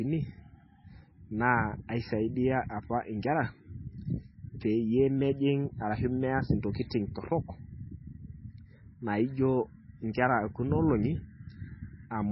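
Speech with heavy MP3 compression throughout: nothing remains above 5.6 kHz, and weak frequency lines flicker on and off between frames, giving a watery, swirly texture, likely from a bitrate near 16 kbps. A plain low-pass filter would cut the treble without that warbling.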